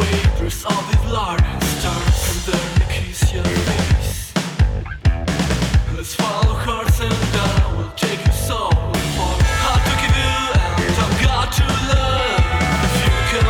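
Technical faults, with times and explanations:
No technical faults can be heard anywhere in the clip.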